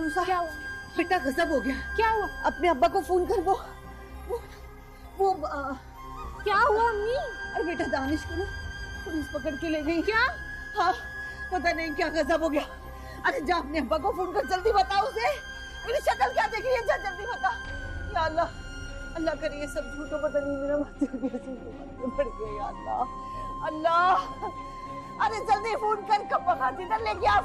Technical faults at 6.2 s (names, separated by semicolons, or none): none